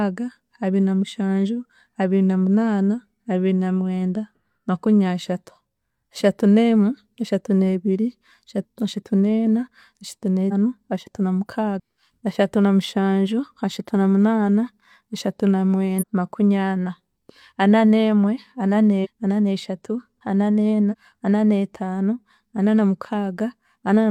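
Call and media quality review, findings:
Speech jumps forward at 8.6, 10.48, 11.76, 15.98, 19.01 and 20.89 s. Compressed frames skipped: decoder drops whole frames that are missing or rejected as damaged, so playback skips ahead by multiples of the 42.7 ms frame. About 0.2 to 0.7 s of speech lost at each point, longest near 8.6 s.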